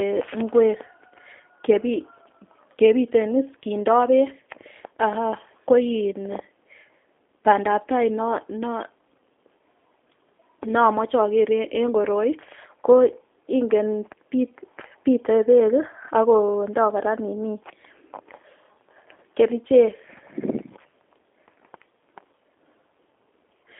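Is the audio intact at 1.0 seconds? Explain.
No. At 1.0 s, as throughout the clip, the speech carries G.729 codec damage. It is rebuilt from a vocal tract filter, pitch predictor and sparse pulses, consistent with an 8 kbit/s stream. Nothing passes above 3.6 kHz, leaving the speech audibly rough and synthetic.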